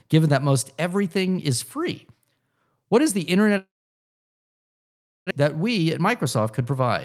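It's a speech clip. From 3.57 to 5.33 s the sound fades into about 1.6 s of silence, likely a long network dropout, and about a second of audio never comes back. From 5.40 to 6.88 s a jitter buffer speed-up trims roughly a tenth of a second, so speech runs at 106% speed with unchanged pitch and sounds hurried.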